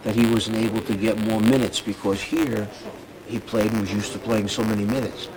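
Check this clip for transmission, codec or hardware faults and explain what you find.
One fault is present throughout: buffer tearing. The writer and the hardware reader have slipped. A tiny sliver of each buffer replays sound about 20 ms old. Its hard joins produce a robotic 100 Hz buzz whenever sound plays.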